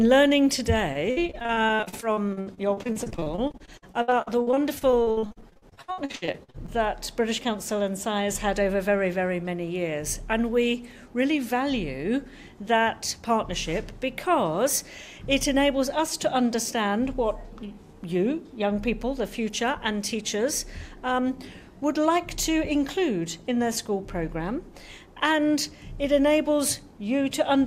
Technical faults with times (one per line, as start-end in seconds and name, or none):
0.93-6.70 repeated packet loss (robotic sound)